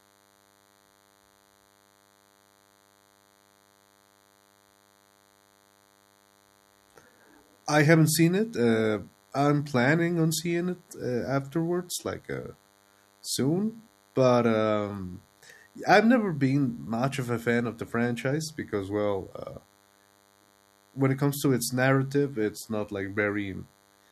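A nearby DECT handset or base station is sending a radio burst every 10 ms, and the audio circuitry rectifies it. The result, a DECT cordless phone buzz, sits under the speech for the whole clip as a thin, steady 100 Hz buzz rich in harmonics, roughly 35 dB below the speech.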